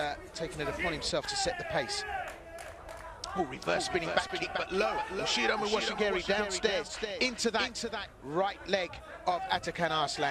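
From 2.60 s to 8.06 s the audio has a doubled audio track. A second full-band copy trails by roughly 0.4 s, about 5 dB quieter. It has no decay or room colour. It starts and stops abruptly. A slower second capture path is the likely cause.

At 4.27 to 4.31 s there is short concealed packet loss. About 20 ms of audio never arrived in time. The receiver filled the hole by extending the preceding sound, then blended back. It comes through as a brief smear.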